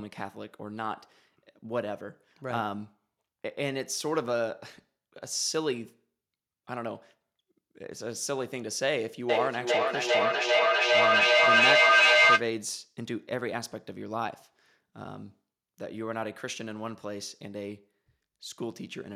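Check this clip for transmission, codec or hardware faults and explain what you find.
One fault is present: feedback echo between two devices, from 9.29 to 12.51 s. A second device in the room replays the far end, and that microphone picks it up again. The local echo canceller ignores another device's output. The speech returns roughly every 0.4 s, and the repeats build to about 11 dB above the speech instead of decaying.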